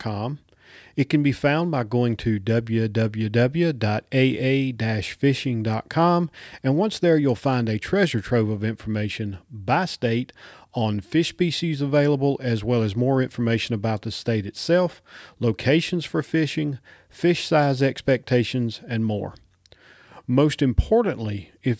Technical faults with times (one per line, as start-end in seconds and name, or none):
none